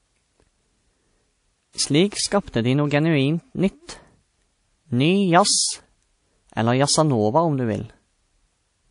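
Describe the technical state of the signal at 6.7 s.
At 6.7 s the speech sounds dull, with nothing above 10.6 kHz and two layers of codec artefacts heard together, as throughout the clip. This is likely transcoding between lossy codecs, fitting a low-rate MP3 re-encoded to WMA, each adding its own damage.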